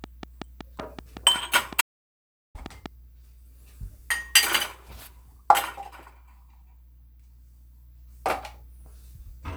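From 0.04 s to 2.87 s a train of clicks ticks over the sound at a steady 5.3 per second, roughly fifteen sharp pulses standing well above the material. Their even spacing and matching shape set them apart from random crackle, likely from interference from nearby equipment.

At 1.81 s the audio drops out to silence for about 0.74 s, returning at 2.55 s. The gap is silent with no room tone, which fits a likely lost input written as silence rather than a quiet passage or a sharp fade.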